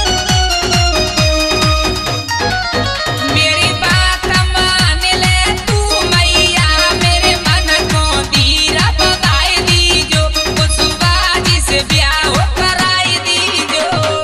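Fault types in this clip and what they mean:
MP2 compression: The sound is dull and carries a gurgling, granular roughness throughout, as upper sub-bands drop in and out and the bands that remain are coarsely quantised. This is likely MPEG Layer II coding, with damage that fits a low rate of around 80 kbps. Unlike a simple low-pass filter, the top end flickers instead of being cut cleanly, and the grain lacks the swirly, metallic smear associated with MP3.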